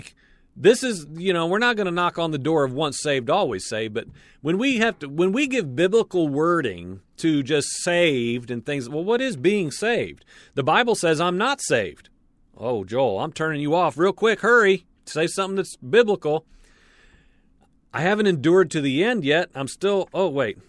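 Nothing technical goes wrong anywhere in this bit of speech, so there's no fault to point to at any moment.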